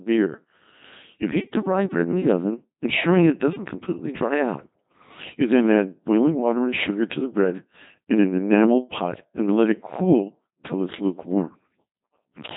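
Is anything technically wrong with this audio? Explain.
Yes. Throughout, the speech passes through a Codec 2 vocoder, likely near 2.4 kbit/s, rebuilt from pitch and envelope as sine waves. It sounds heavily robotic and buzzy, with nothing above 3.8 kHz.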